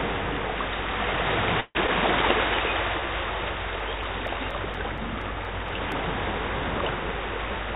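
At 1.6 s the sound stops moving forward for about 0.18 s. The last moment is stretched into a fading buzz that trails into roughly 30 ms of silence before the audio resumes from where it left off. This is a call audio freeze, most likely caused by packets stalling in transit and the jitter buffer running dry. About 149 ms is filled and nothing is lost, so everything after it arrives 149 ms late. On a spectrogram the last frame's pattern smears horizontally, then goes dark. The waveform shows a decaying envelope and a flat gap.

From 1.87 to 1.91 s comes short concealed packet loss. About 40 ms of audio never reached the decoder in time. Only about 8 ms was patched by extending the preceding sound before the decoder blended back into the real signal, so the listener hears a quick smear and a small jump. The timing pulls back by a few tens of milliseconds. The waveform shows a brief splice, and the spectrogram shows a thin vertical seam where the texture changes abruptly.

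Between 3.8 and 5.92 s there are CD scratch ticks: ten small clicks or micro-dropouts, regularly spaced at one per disc revolution. Each comes from a blemish destroying more data than error correction could rebuild, so the player interpolated or muted a few milliseconds, the longest about 5 ms. On a spectrogram they appear as evenly spaced vertical lines. In the waveform they show as tiny notches or flattened spots. Throughout, the G.711 call path leaves no content above 4 kHz.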